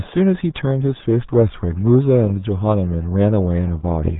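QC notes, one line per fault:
Throughout, RealAudio 14.4 codec damage. The speech is heavily muffled and gargly, with nothing above 3.8 kHz. The coder squeezes the signal into a very low bitrate, which fits about 8 kbit/s. It models speech crudely and throws away the upper band.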